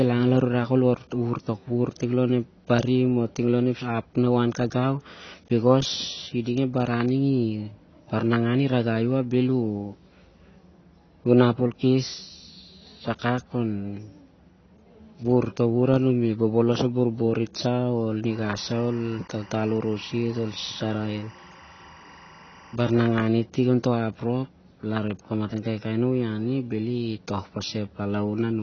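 From the start, the speech sounds dull and smeared, with nothing above 6.5 kHz. Sibilants and held vowels carry a fizzy, warbling texture. The likely cause is AAC compression at a low bitrate, which fits AAC-LC near 24 kbps. At that rate the encoder lowers its cut-off and quantises the remaining frequency lines coarsely against its hearing model. That leaves gaps in the spectrum and an unstable, swirling top end.

From 18.31 to 23.28 s, a steady chirping warble sits behind the speech, roughly 25 dB below it. This is timecode bleed. Linear timecode from a neighbouring track or cable has leaked into the audio. The code is a square wave switching between pitches around 1 and 2 kHz, and here it points to a 23.976-frame-per-second code. That switching pattern produces the rapid two-tone chatter.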